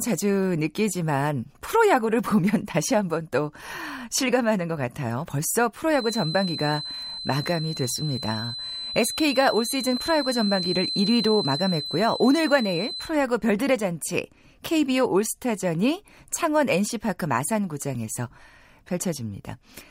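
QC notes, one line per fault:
5.88–13.14 s, feedback whistle: a thin, steady tone at 4.1 kHz sits behind the speech for about seven seconds, some way below the voice, swelling and fading slowly in level but never running away. The likely cause is a loudspeaker-to-microphone loop held right at the edge of feedback, so a single high frequency keeps recirculating at near-unity gain, sustaining itself without building, until it stops at 13.14 s.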